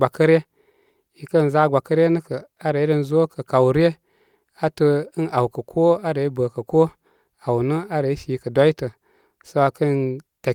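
There are no technical faults to describe at any point in this speech recording.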